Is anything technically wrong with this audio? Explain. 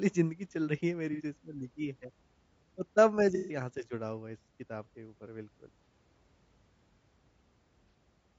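Yes, there are two problems. Low-delay AAC compression runs throughout the speech, likely AAC-ELD at a low bitrate around 32 kbps. Its short frames resolve pitch harmonics poorly, so the voice sounds plainly rough and grainy, with noise filling the gaps between harmonics and a synthetic-sounding top band.

AAC frame loss with concealment occurs at 1.13–1.21 s, 3.35–3.61 s, 5.84–5.87 s and 7.89–7.94 s. Missing frames were filled in by the decoder from the last good spectrum, so each gap, from about 30 ms to 150 ms, becomes a smeared, noisy, phasey patch, longest near 3.4 s.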